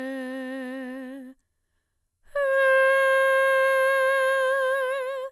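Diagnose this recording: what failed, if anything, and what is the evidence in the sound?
Throughout the music the top end stops dead at 12.6 kHz, and the sound is swirly and hollow, with blurred attacks. This is generation loss at the codec stage, likely from about seven passes through an MP2 encoder near 128 kbit/s, each adding fresh quantisation noise and spectral holes.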